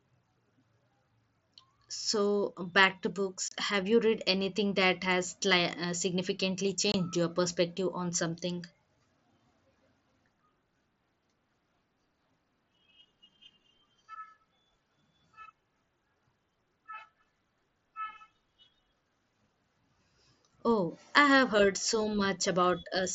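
At 3.48 s, just after "back to", the speech drops out for about 30 ms. This is unconcealed Bluetooth headset packet loss: a run of short voice frames between headset and phone never arrived and nothing filled the gap. At 6.92 s a second hole of about 22 ms follows "uh significantly" and comes before "your perspective on something". Both gaps have hard edges. On a waveform each shows as a flat stretch with sharp, squared-off boundaries. A spectrogram shows a thin vertical blank band with a bright broadband line at each edge. The link itself is the mSBC wideband headset codec, and speech sounds limited to about 8 kHz with light graininess.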